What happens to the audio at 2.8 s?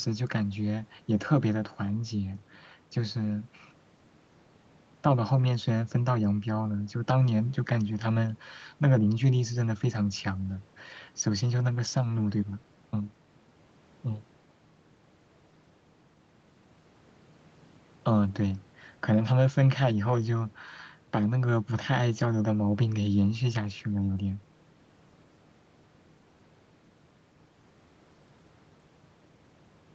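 Nothing goes wrong at 2.8 s: the speech there comes through intact, with only the ordinary band limit of the call path, which leaves nothing above 8 kHz.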